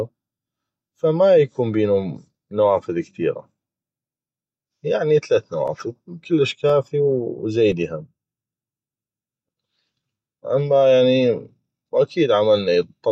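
From 3.63 s to 7.72 s, just after "يكون بينو نوافذ كثيغه", the speech shows periodic USB or driver dropouts. A stalled driver loses about 2 ms of audio each time and fills it with silence. Roughly five evenly spaced gaps recur every 1.02 s and sound like regular ticks.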